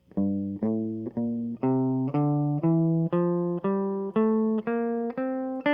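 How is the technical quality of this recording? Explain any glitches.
Nothing in this music recording registers as a technical fault or glitch to the ear.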